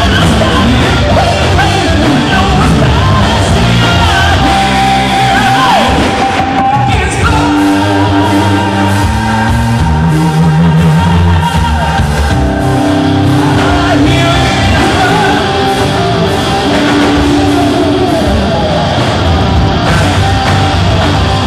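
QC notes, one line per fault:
Throughout, hard clipping: a harsh fuzz rides on every loud moment rather than just occasional crackle. The signal is pushed about 9 dB beyond what the stage can pass, so peaks are cut flat on roughly one sample in seven, spraying high harmonics.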